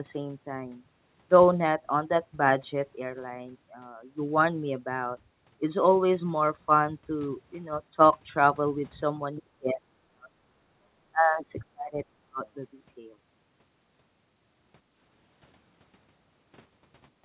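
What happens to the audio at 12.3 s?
From 10.73 to 12.43 s the speech dips in pieces by up to about 40 dB, likely speech suppressed in double talk: an echo canceller unable to separate its own talker from the loudspeaker echo and turning both down.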